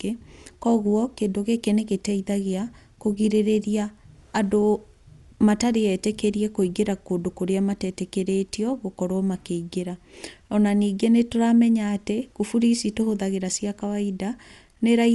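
Speech, dull for the whole clip. Nothing sounds above 11.4 kHz. Rough, fluttering noise surrounds tones where starved frequency lines are filled with noise. Likely Dolby Digital compression, fitting about 64 kbps.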